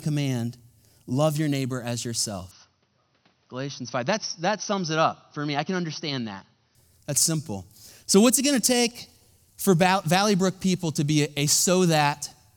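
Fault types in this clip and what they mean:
Input switched to a poorer device: Right after "love your neighbor as", at 2.51 s, the speech abruptly turns duller and a little quieter, with no gap. Nothing reaches above 6 kHz. A faint new background noise appears. This is likely a different microphone. It clears at 6.75 s.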